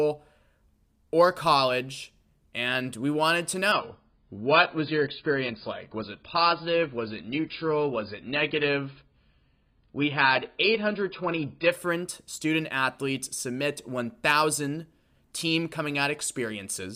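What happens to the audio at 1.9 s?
Nothing goes wrong at 1.9 s; the speech carries on intact through that moment, with no dropout, click or distortion to be heard.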